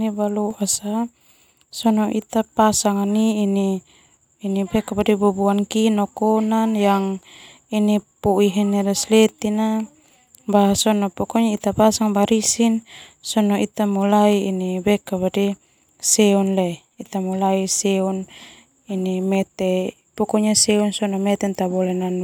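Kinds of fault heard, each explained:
Sudden gain jump: A digital gain change was likely applied from one sample to the next with no ramp. From 0.51 to 0.76 s the speech and its background noise step up together by about 6 dB, then drop back just as abruptly.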